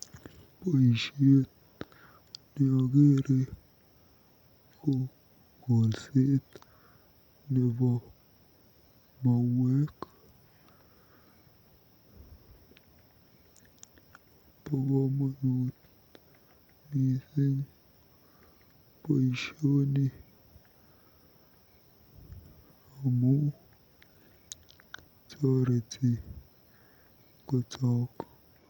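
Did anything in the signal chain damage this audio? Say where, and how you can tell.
No, no signal-chain damage heard.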